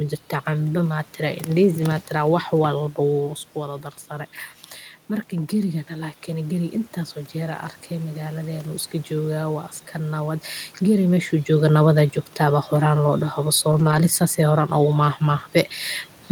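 At 1.81 s a packet was lost, and the decoder filled the gap with the low-bitrate copy carried in the next packet, a lost packet rebuilt from error correction. About 20 ms of speech sounds briefly rougher and noisier but doesn't drop out.

From 7.89 to 10.44 s the automatic gain control judged the input too quiet and raised its gain gradually, about 3 dB in all. With the automatic gain rising, the voice and the room noise swell together over those seconds.

Between 13.71 and 13.97 s the same error-correction rebuild recurs across several separate losses, about 140 ms of speech in all, which fits a handful of 20 ms packets. Each patched stretch sounds coarse and noisy, with no silent gaps.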